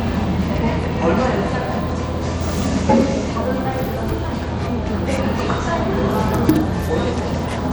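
Throughout, the treble flickers and thins, with gritty noise riding on the sounds. This is likely Bluetooth SBC compression, starved of bits, which fits a bitrate around 96 kbps.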